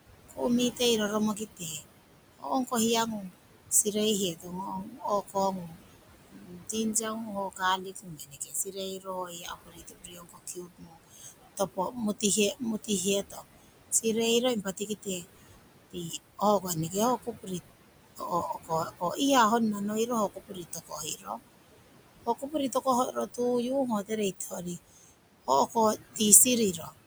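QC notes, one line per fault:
Throughout: noise suppressor artifacts. The room noise, about 11 dB below the speech, pumps up under syllables and sinks by about 21 dB in the gaps. The suppressor is attenuating the bands it judges to be steady noise, frame by frame.
0.29–26.94 s: speech cut by the noise suppressor. Soft consonants and word tails sound swallowed, dropping by up to about 21 dB, for roughly ten seconds in total across the span. Quiet speech energy sat close to the room noise, so the suppressor treated it as background and cut it.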